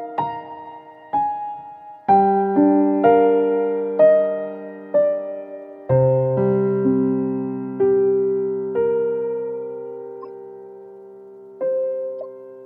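Two bursts of corrupt frames got decoded anyway, at 10.22 to 10.29 s and 12.21 s. Flipped bits misplace energy across a few frames, giving short chirpy blips, the second louder.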